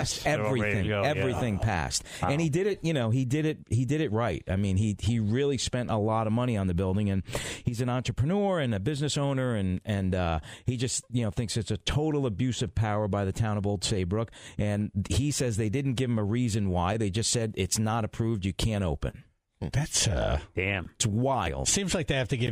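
A short stall from a late packet occurs at 19.10 to 19.16 s. A packet failed to arrive on time, the jitter buffer ran dry, and the receiver filled the gap by stretching the preceding sound for about 29 ms until the data turned up. Playback then resumed from the same point, so nothing is lost, but everything afterwards runs 29 ms later. It sounds like a brief hold on one sound, with a faint buzz or dip.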